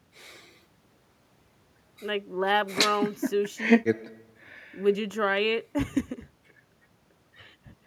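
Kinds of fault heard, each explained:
No technical fault can be heard anywhere in the speech recording; the signal stays continuous and stable throughout.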